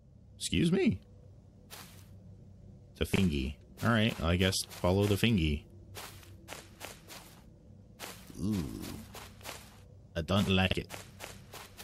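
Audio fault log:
3.14–3.18 s and 10.67–10.73 s, chunks out of order: two brief jumbled moments. A short block of audio, about 21.33 ms, plays after blocks that should have followed it. Nothing goes missing, but the shuffle leaves three hard joins. The first event sounds like a one-block slip, and the second like a block about two positions late.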